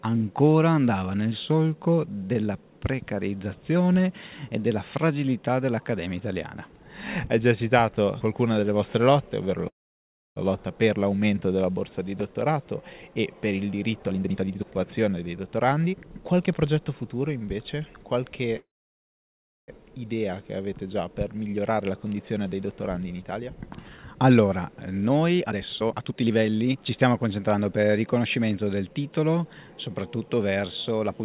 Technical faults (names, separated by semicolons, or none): call audio freeze; jitter buffer speed-up